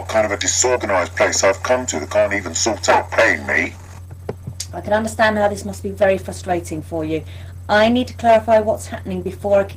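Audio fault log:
3.53 s to the end: adaptive stream at a lower bitrate. The sound abruptly turns swirly and thick with codec artefacts, with no gap at the switch. It's what you'd expect when a slowing connection pushes the player down a tier, which fits Opus falling from roughly 64 to 16 kbit/s.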